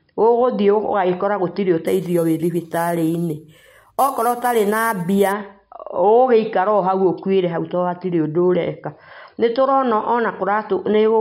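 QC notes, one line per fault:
1.87–5.32 s, imaging from sample-and-hold upsampling: each sample was repeated with no smoothing filter, so mirrored copies of the speech spectrum, about 20 dB below it, fill roughly 5.5–11 kHz. This fits an original rate near 11 kHz and produces a bright metallic fizz that tracks the speech's loudness.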